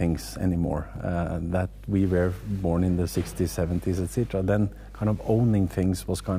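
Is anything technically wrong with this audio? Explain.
Yes. Mains hum runs through the whole clip. A steady low tone sits at 50 Hz, with some energy at its low harmonics. It is strong, roughly 15 dB below the wanted sound. The cause is power-line current leaking into the signal path. A ground loop between connected equipment or a nearby transformer would do this. The 50 Hz pitch points to a 50 Hz supply.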